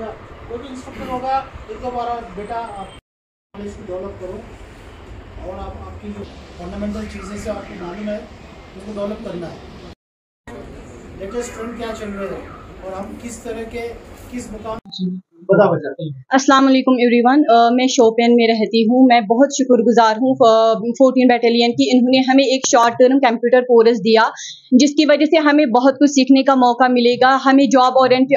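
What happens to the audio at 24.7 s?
Nothing goes wrong at 24.7 s: the audio plays through that moment intact, with no dropout, click, distortion or other fault.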